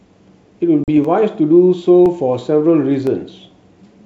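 At 0.84 s the speech drops into a hard-edged silent hole of about 40 ms, about a couple of packets' worth, and comes back with brief slight distortion before settling. This is packet loss on an ADPCM call: the decoder's adaptive predictor and step size lost track of the sender's during the gap and needed tens of milliseconds to catch up.

From 1.05 s to 3.07 s, clicks recur at a steady 1.02 s interval, about three in all, each sounding like a handful of samples dropped or repeated. The likely cause is clock drift buffer slips: a sender and receiver on clocks a few hundred ppm apart, so the buffer between them overflows or runs dry at regular intervals. All of this sits within the G.722 wideband telephone coding, which still carries clear speech up to 7 kHz.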